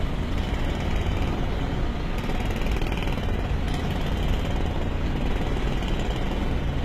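From start to finish the treble has a synthetic, gritty sheen, with bright detail that sounds pasted on rather than captured. This is likely HE-AAC compression: the low band is coded directly while the upper range is rebuilt by copying lower bands upward, so its harmonics no longer match. The damage is plainly audible, fitting a rate near 20 kbps. A spectrogram shows blocky, repeated patches above the crossover and nothing above 14.8 kHz.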